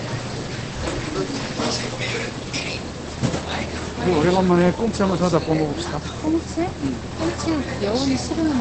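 From start to end the audio sounds muffled and hoarse, with nothing above 8.5 kHz. A spectrogram shows a flat ceiling there. The likely cause is Opus compression in its SILK speech mode, which fits a low bitrate around 16 kbps.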